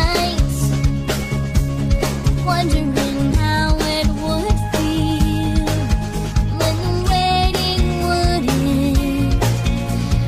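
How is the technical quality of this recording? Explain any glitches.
One glitch stands out. From 3.31 to 3.35 s there is damaged data in the compressed stream: corrupted bytes make the decoder misread frames and hunt for the next valid header, giving a brief chirp, squawk, click or short hole.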